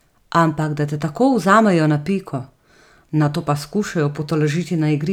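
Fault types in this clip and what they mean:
No audible faults anywhere in the speech; nothing to list.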